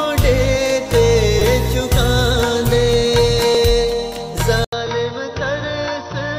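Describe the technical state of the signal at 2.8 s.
Nothing at 2.8 s points to a technical fault; the audio is intact there.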